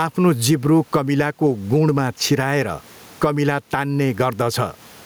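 Gain pumping throughout: gain likely set far too high, so a fast limiter swings level by around 15 dB, squashing the speech over faint room noise.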